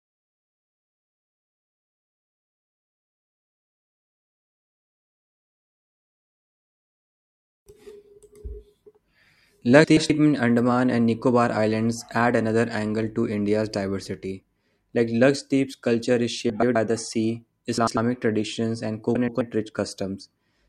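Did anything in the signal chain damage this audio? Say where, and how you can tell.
Yes, frames out of order, introduced in transport at the network stage, where neighbouring packets were reordered before decoding. Four short garbled flutters occur at 9.84–10.10 s, 16.50–16.76 s (after "culture is"), 17.78–17.97 s (after "the sea") and 19.15–19.41 s (after "traditions and"). Each swaps two adjacent blocks of about 128 ms (96 ms in the third), which fits runs of three or four frames. Unlike packet loss or concealment, no time is lost and nothing repeats.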